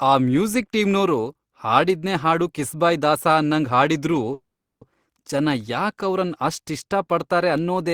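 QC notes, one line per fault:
4.33–4.84 s, call audio freeze: after "ಕಿಸ್ಬಾಯ್ ದಾಸ ಅನ್ನಂಗ್ ಹಾಡಿದ್ರೂ" the speech stalls into a fading buzz, then about 400 ms of silence, resuming intact at "ಜನ ಯಾಕ್ ಅವ್ರನ್"; likely delayed packets draining the jitter buffer.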